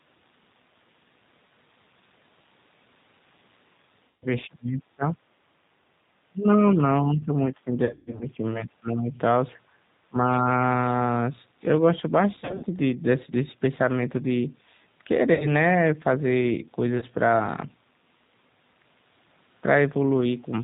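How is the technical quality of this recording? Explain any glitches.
The recording is narrowband and slightly synthetic throughout, with several dropouts and dips.

The G.729 codec, at 8 kbit/s, removes everything above 4 kHz and leaves the speech rough and synthetic. This dullness is constant, unlike the brief glitches.

VoIP packet loss concealed by the speech codec occurs at 4.08–4.27 s (140 ms lost), 7.85–8.28 s (240 ms lost in bursts up to 120 ms), 12.35–12.66 s (180 ms lost), 15.34–15.52 s (60 ms) and 16.98–17.05 s (40 ms). In each gap the decoder stretches the last sound into a fading buzzy tone or coloured noise. The voice stays weak briefly afterward.

Speech suppressed in double talk appears at 4.47–5.16 s, 6.29–9.10 s and 10.09–10.45 s. The voice drops by up to about 25 dB, about 15 dB in the middle span. This was likely an echo canceller ducking the voice while the far side spoke. 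Unlike concealment, the voice here is turned down rather than replaced with a buzz.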